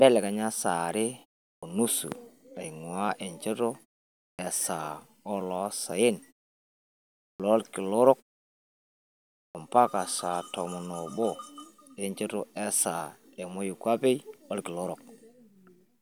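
Speech with clipped starts after pauses at 1.56, 4.33, 7.33 and 9.49 s, each losing 59 to 67 ms of onset while the idle output device wakes.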